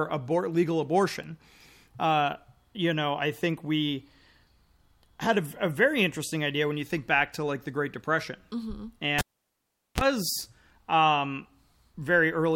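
This is a speech clip with a cable pulled and plugged in. At 9.19 s a pop cuts the sound. Near silence follows for about 0.78 s while the live lead is out. As the plug goes back, only its tip touches first. That gives a short burst of 60 Hz mains buzz, lasting about 32 ms. A second pop marks full contact, and the speech returns at 10.01 s.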